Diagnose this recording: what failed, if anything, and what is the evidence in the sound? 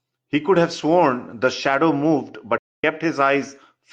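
The fault is in the codec stage: AAC frame loss with muting. From 2.57 to 2.84 s the speech fades into silence and back, a hole of about 256 ms, which fits roughly six lost frames zeroed by the decoder. The overlapping windows soften both edges, unlike a hard sample-level dropout.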